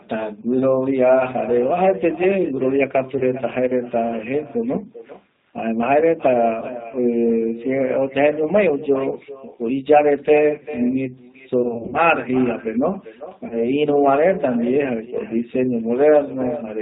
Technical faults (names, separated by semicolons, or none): echo with no canceller; G.729 codec; VoIP packet loss concealed by the speech codec